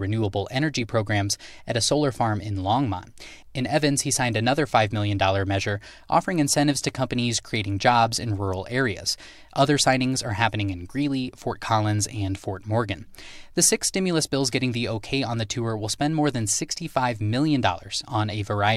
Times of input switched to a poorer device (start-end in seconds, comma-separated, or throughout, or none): none